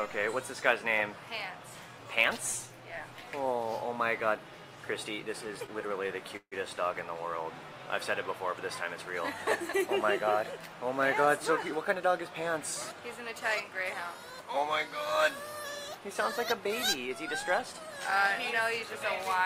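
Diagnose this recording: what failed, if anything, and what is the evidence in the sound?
Network stage, call audio freeze at 6.37 to 6.54 s. The sound stretches into a fading buzz, then 60 ms of silence. The likely cause is delayed packets emptying the jitter buffer.

Buffer stage, jitter buffer speed-up from 17.59 to 19.34 s. The audio runs about 5% fast at unchanged pitch. Roughly a tenth of a second is trimmed away in short slices.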